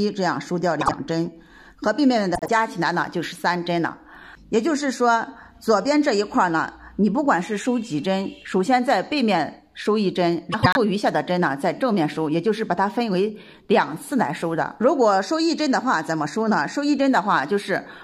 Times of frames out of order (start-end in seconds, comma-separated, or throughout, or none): 0.81-0.93, 2.35-2.49, 10.52-10.77